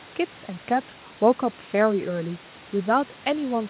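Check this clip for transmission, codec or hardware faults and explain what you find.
No transmission, codec or hardware faults can be heard.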